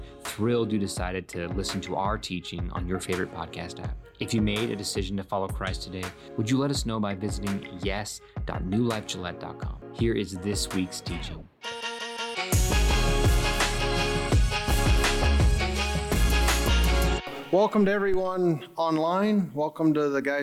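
At 4.71 s a single sharp click cuts through the sound. A second click follows at 13.87 s. Each is most likely caused by dropped samples. A tiny run of samples, a fraction of a millisecond, goes missing from the stream. The waveform jumps straight from one value to a later one. The gap is far too short to remove any audible sound. Only the abrupt step is heard, as a brief tick.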